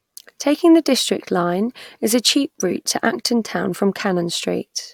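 No technical faults occur at any point in the speech.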